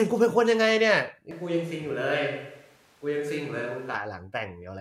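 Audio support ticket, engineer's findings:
Switch to a distant microphone, 1.31–3.95 s: speech abruptly turns roomy and hollow, thinner low end, level roughly unchanged, background noise about 30 dB down. Likely close-mic dropout, farther pickup used.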